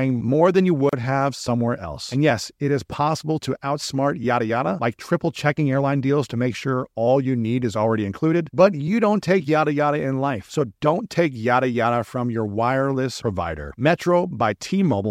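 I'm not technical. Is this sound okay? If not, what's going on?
No. There's a gap at a join of encoded pieces at 0.89 s, after "more than you." The speech was saved in separate chunks, and leftover padding where they meet leaves a 34-millisecond hole before "have somewhere else."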